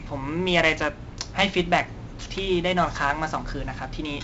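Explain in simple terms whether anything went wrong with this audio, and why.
Heavy 4-bit ADPCM compression stored each sample as a rough step, so gritty hiss follows the speech throughout and nothing above 7.8 kHz remains, dulling it.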